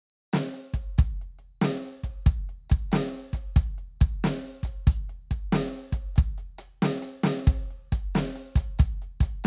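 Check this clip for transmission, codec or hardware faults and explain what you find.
No faults can be heard anywhere in this music.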